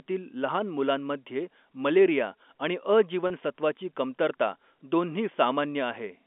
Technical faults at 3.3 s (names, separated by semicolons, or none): packet loss with pitch repetition